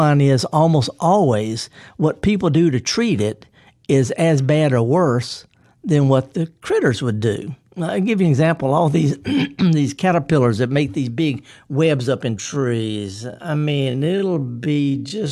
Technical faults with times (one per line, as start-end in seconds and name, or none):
12.32-15.31 time-stretched section